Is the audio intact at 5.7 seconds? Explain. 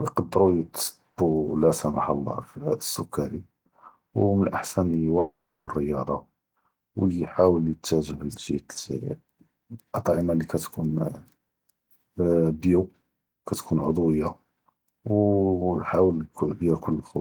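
No. A long network dropout runs from 5.19 to 5.70 s, ending right at that moment. About 480 ms of the speech never plays. The gap is covered by a continuation of the preceding sound that decays into a buzzy hiss, with roughly 50 ms of silence before the audio resumes. The likely cause is a stalled packet stream with concealment filling in. Unlike a brief packet loss, the concealment here visibly runs out, and the lost speech is skipped rather than delayed.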